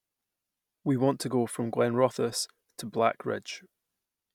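No technical faults are audible anywhere in the speech.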